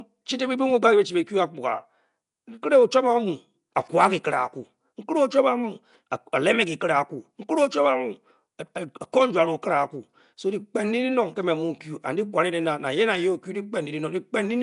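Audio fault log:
throughout, Nellymoser compression: rough, hissy halo over smeared, underwater-sounding speech, nothing above 10.6 kHz; likely Flash's codec filling starved bands with noise, unlike MP3's warbling.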